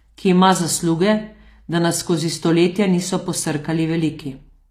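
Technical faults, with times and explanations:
Throughout, HE-AAC compression: treble stays bright but rebuilt, so s sounds turn gritty and lispy rather than dull as with a low-pass cut, likely from a low bitrate near 24 kbps.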